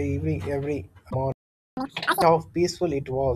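At 1.07 to 1.15 s there is damaged data in the compressed stream. The decoder misreads corrupted frames, loses sync and hunts for the next valid header, producing a short glitch. On a spectrogram it appears as a brief disruption breaking the harmonic pattern.

From 1.32 to 1.77 s a playback stall cuts the speech off mid-flow for about 0.45 s. The player likely ran short of data or was blocked before resuming where it stopped. The waveform drops to a flat line, and the spectrogram shows a clean, fully empty vertical gap.

From 1.77 to 2.22 s comes catch-up at higher speed. The player works through its backlog at 2x by resampling, so the speech sounds hurried and chipmunk-like, pitched up nearly an octave, before snapping back to normal. On the spectrogram the harmonics sit higher and more widely spaced, with compressed timing.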